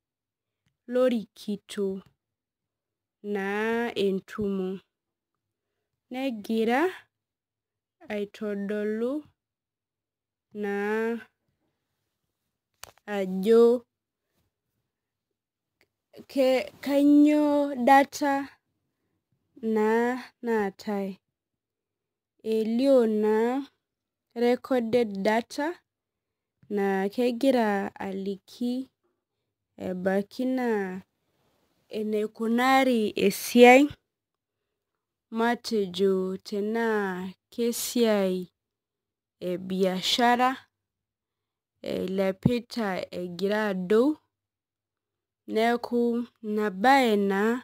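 Crude rate conversion runs throughout the speech, consistent with 48 kHz audio dropped to 44.1 kHz by nearest-sample picking, leaving a gritty, inharmonic fizz roughly 30 dB below loud passages.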